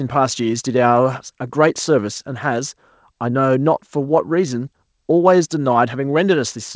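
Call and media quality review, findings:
No faults found in this speech; top end stops at 8 kHz, as expected from a wideband call path such as G.722.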